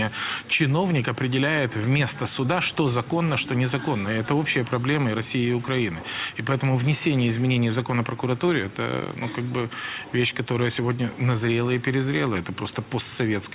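No technical fault can be heard anywhere in the audio; the signal holds steady and intact for its whole duration.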